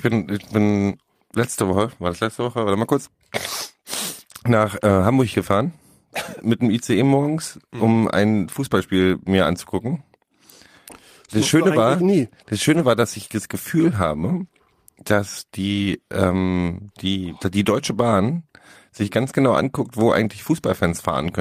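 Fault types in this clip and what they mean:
Lost packet rebuilt from error correction: between 12.73 and 12.79 s the speech does not drop out, but about 40 ms of it turns rougher and noisier than the surrounding audio, which fits two 20 ms packets going missing. The decoder filled the hole with the low-bitrate backup copy carried inside the following packet, Opus in-band forward error correction, so continuity is kept at the cost of a brief patch of coarser, grainier sound.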